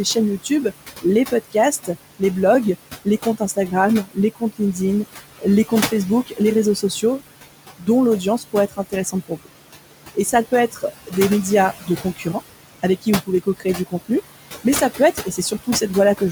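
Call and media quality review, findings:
Noise suppressor artifacts throughout. Room noise, sitting about 13 dB under the speech, is pulled down by about 17 dB between phrases and swells back under them. Frame-by-frame band gating by the noise suppressor.

Speech cut by the noise suppressor at 0.05–2.22, 3.05–4.78, 5.39–7.03, 7.79–9.47, 10.15–11.13, 11.82–12.26, 12.83–14.1 and 14.64–16.2 s. Soft consonants and endings are swallowed, dropping about 13 to 17 dB. A few hundred milliseconds are lost per stretch. The suppressor misclassifies quiet speech as noise.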